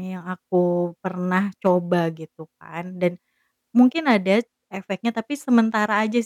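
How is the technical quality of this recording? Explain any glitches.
The speech has one glitch near the end. Channel delay (comb filtering), 4.40 to 6.08 s: one channel lags by roughly a sample, so mono summing cancels the top end, with a first notch near 20 kHz, leaving the top of the sound dulled.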